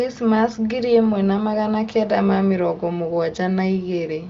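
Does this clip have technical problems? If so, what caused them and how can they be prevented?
No, there are no technical faults to fix; the content stopping near 7.1 kHz simply reflects the AMR wideband (HD Voice) path it came through, which sounds consistent with that codec running at one of its higher rates.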